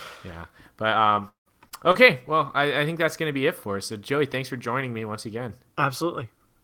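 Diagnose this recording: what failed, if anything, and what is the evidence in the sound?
The network path dropped or delayed packets repeatedly between 1.15 and 1.96 s, just before "well I I think". Four separate holes appear, the longest about 172 ms, and about 220 ms of that stretch (roughly 27%) is filled by concealment that stretches the last good sound over each gap. That repeated extrapolation gives the speech a choppy, robotic texture, and because only a few tens of milliseconds are actually rebuilt, pieces of the speech are simply missing.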